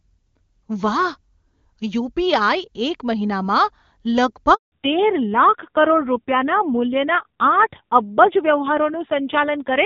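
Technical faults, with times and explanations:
4.54 to 4.72 s, handover gap: the speech cuts out into 180 ms of silence because no frames arrived while the call switched networks, so that stretch is lost.
4.72 s to the end, fallback to narrowband: the speech turns duller and rougher with nothing above 4 kHz, which fits a drop from HD Voice to a low-rate narrowband codec.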